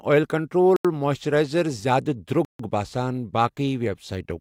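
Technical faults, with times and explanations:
0.76–0.85 s and 2.45–2.60 s, Bluetooth stall: the speech drops to silence for 83 ms, then 145 ms, and resumes. Likely interference delayed packets until the headphone buffer emptied. The waveform shows flat gaps, and the spectrogram shows blank vertical bands with abrupt edges.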